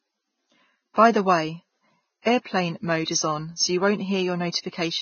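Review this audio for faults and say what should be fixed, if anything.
Throughout the 5-second speech clip, nothing is present above 6.6 kHz, and the artefacts of a very low-bitrate encode remain audible. This points to low-bitrate audio saved at a high bitrate, likely a Vorbis file near 16 kbit/s re-encoded as MP3 at around 211 kbit/s. The larger file cannot restore what the first codec discarded. To prevent this, encode from the original uncompressed source rather than from an already compressed copy.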